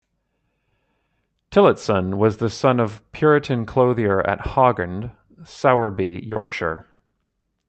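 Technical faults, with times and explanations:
5.75–7.45 s, repeated packet loss (robotic sound): rapid dropouts, each filled by extending the last sound, conceal 39% of this stretch, with gaps up to 140 ms, sounding choppy with pieces missing.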